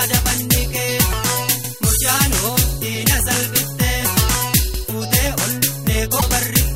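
The audio was cut into chunks about 3 s long, and each chunk began before the previous one had finished. At each join, about 100 ms of material plays twice. These overlapping chunks are heard at 1.64–1.74 s and again at 4.74–4.84 s, 3.1 s apart. Each is a brief stutter, a small doubled fragment, and the regular spacing gives them away.

At 6.17–6.23 s there is damaged data in the compressed stream. Bytes in that stretch were corrupted, so the decoder misread the frames, lost sync and had to search forward for the next valid frame header. For roughly 56 ms the sound breaks up.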